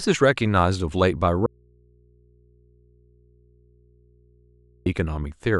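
At 1.46 s the speech cuts off abruptly, and until it snaps back at 4.86 s the gap of about 3.4 s holds nothing but a low mains hum, sitting roughly 35 dB below the level of the talking. This is an audio dropout to a faint residue: the wanted signal was likely lost upstream while the rest of the chain stayed live, so the open input's hum carried on through the break.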